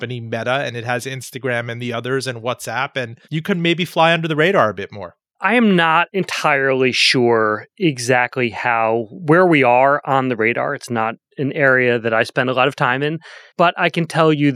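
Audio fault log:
No fault detected anywhere in the speech recording.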